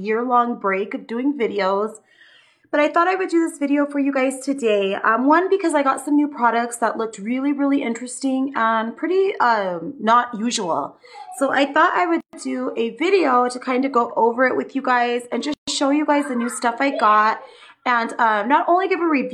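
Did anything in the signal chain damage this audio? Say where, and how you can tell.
Yes, at the codec stage. Pieces encoded separately were joined untrimmed, leaving each one's encoder start-up delay and last-frame padding in place. Continuous sound drops out at 12.21 s for 127 ms and at 15.54 s for 139 ms, then resumes where it stopped.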